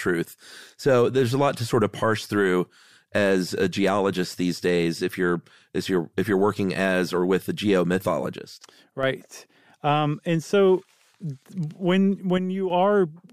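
At 8.38 s the speech and the background noise drop together by about 6 dB, then jump back at 9.03 s; a second drop of about 7 dB runs from 12.38 to 12.70 s. These are sudden gain jumps, likely a digital gain change applied between one sample and the next without a ramp. On a waveform the envelope steps down and up abruptly at each edge, and a spectrogram shows every band, noise floor included, darkening at once.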